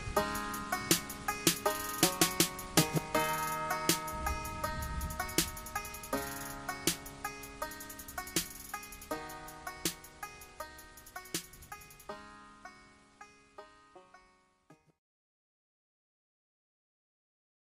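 No technical fault can be heard anywhere in this audio. There is nothing here that needs a timestamp or an explanation of cause.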